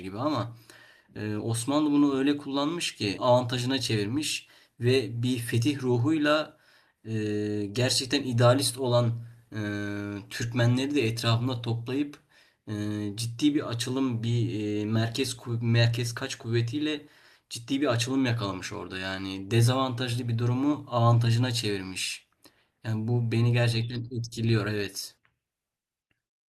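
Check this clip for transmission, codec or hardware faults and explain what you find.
Two transmission faults are audible, both early in the speech.

At 3.17 s there is a skip ahead: roughly a second of audio was discarded and playback jumps straight across it, with no silence or fill, unlike a dropout gap.

From 3.27 to 5.21 s comes a jitter buffer speed-up: the buffer trims small pitch-period slices, about 150 ms in total, so the speech runs about 8% faster at unchanged pitch, unlike a resampling error.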